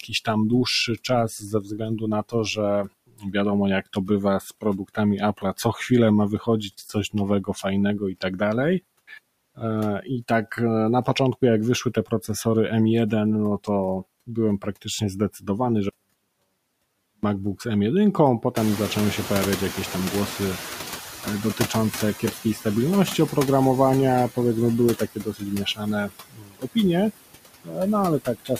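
Noise suppressor artifacts run through the whole speech clip. The suppressor pulls steady background down by about 19 dB frame by frame, so the noise sinks in gaps and swells under speech. This is a constant texture, not a timed event.

Speech cut by the noise suppressor first appears from 0.03 to 8.41 s, with roughly 2 s of syllables pulled down by as much as about 21 dB. Further cuts fall at 9.08–12.46 s (about 15 dB), 14.27–15.49 s (about 17 dB), 21.23–22.66 s (about 13 dB), 24.98–26.77 s (about 22 dB) and 27.64–28.60 s (about 20 dB). Soft consonants and word endings sound swallowed.

From 15.89 to 17.23 s comes an audio dropout to a faint residue. For 1.34 s the sound is replaced abruptly by a faint trace about 30 dB below normal level, which most likely means the signal was lost while the path after the break stayed live. The hard edges on both sides set it apart from a suppressor cut or a natural pause.

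At around 18.5 s the room noise jumps by roughly 19 dB. From 18.56 to 22.13 s the noise suppressor is catching up. The louder noise first comes through with only about 8 dB of reduction, then sinks gradually over 3.57 s as the estimate adapts. That slow settling separates it from the dropout's sudden switch.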